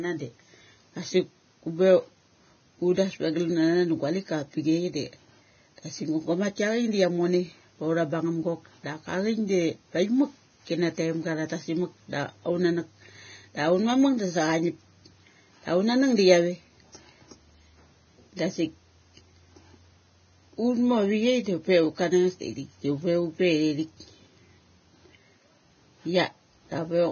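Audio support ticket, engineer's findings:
Hissy, grainy speech throughout; treble roughened, consonant attacks smeared; nothing above 6.6 kHz. Likely heavy Vorbis compression, consistent with roughly 17 kbps: cut-off pulled down, upper residue quantised so coarsely that detail becomes noise of similar energy.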